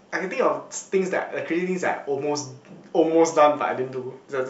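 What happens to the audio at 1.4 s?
Nothing goes wrong at 1.4 s; the speech there plays through cleanly without any dropout, click or distortion.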